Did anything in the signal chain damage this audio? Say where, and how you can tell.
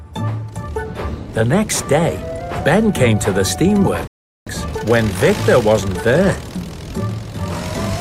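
Yes, a rebuffering stall at playback: silence from 4.07 to 4.47 s while the player starved, then the sound resumes exactly where it stopped, adding 0.39 s and dropping nothing.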